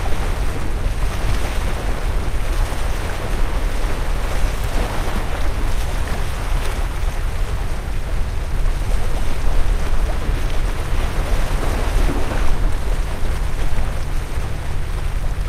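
Listening to these everyday sounds, nothing stood out as a technical problem at any point.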